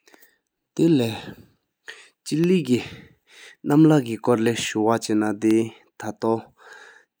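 From 0.39 s to 6.53 s, periodic USB or driver dropouts recur about every 1.02 s. A tiny fraction of a millisecond is replaced by silence each time, giving regular ticks. The waveform shows hairline gaps, and the spectrogram shows thin vertical broadband lines.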